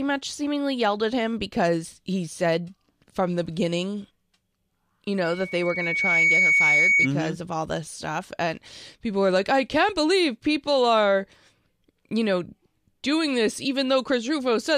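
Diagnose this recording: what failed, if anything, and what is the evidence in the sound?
Loudspeaker feedback squeal in the acoustic loop: a 2.2 kHz tone swells over roughly a second from 5.23 s, peaking around 5 dB above the speech until 7.09 s.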